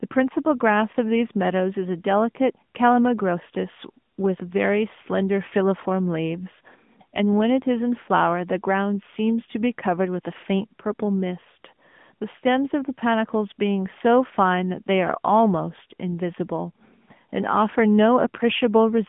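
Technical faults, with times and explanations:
throughout: AMR narrowband mobile codec. The speech is squeezed into a phone-line band of about 150 Hz to 3.5 kHz, with nothing above 3.6 kHz. The codec rebuilds the voice from a vocal-tract model rather than the waveform, which fits a mid-rate mode around 10 kbps, so its damage is plainly audible.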